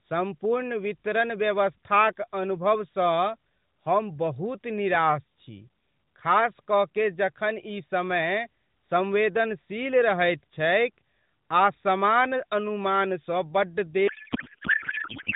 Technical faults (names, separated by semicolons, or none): codec payload misread